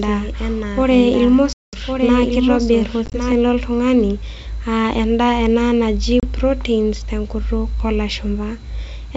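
From the start until 3.32 s, just before "lo ltung'ani", the speech is a doubled audio track. A full-band copy, about 5 dB quieter, trails roughly a second behind with no decay, likely from a second, slower capture path. On a spectrogram the harmonic patterns repeat, shifted sideways, and the copy cuts off abruptly.

Packet loss on an ADPCM call, heard through otherwise clean G.722 wideband coding, opens a hard 200 ms hole at 1.53 s. A 50 ms loss scattered over 3.06 to 3.17 s, with the longest gap 20 ms, falls before "lo ltung'ani", and a 30 ms hole follows "ena naji" at 6.2 s. Each shows as a flat, square-edged gap in the waveform. The decoder's predictor and step size lose step with the sender's, so the speech returns slightly distorted before settling.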